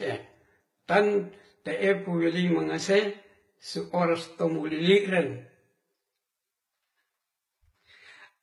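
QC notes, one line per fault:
Throughout: channel delay (comb filtering). One channel runs roughly 10 ms behind the other, and the two are summed to mono. Energy shared by both cancels at evenly spaced frequencies. The first notch sits near 50 Hz, with further notches about every 100 Hz above it. The speech sounds hollow and phasey, as if heard through a tube. The notches stay fixed, so the coloration never changes.
Throughout: transcoding between lossy codecs. Two kinds of coding damage are heard together. Highs are band-limited and partly rebuilt, with a synthetic, swishy top end. Under that sits a smeared, watery texture from an earlier encode. The cause is likely a chain of encodes, which fits a low-rate Vorbis pass followed by HE-AAC near 20 kbit/s. The second encoder spends its scarce bits on the first one's artefacts, so both remain audible.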